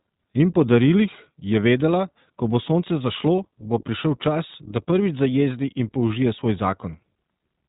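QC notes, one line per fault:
throughout, iLBC codec: The speech passes through a narrowband VoIP coder that rebuilds each short frame independently, with a band edge at 4 kHz, here in the 15.2 kbps mode with 20 ms frames. Everything above 4 kHz is gone, and the voice sounds plainly rough and synthetic.
3.37 s, lost iLBC frames: A packet went missing, and the decoder filled about 20 ms, which fits a single lost frame, by repeating the last pitch cycle blended with noise. That brief held, buzzy vowel-like smear disappears almost immediately because the next frame decodes independently.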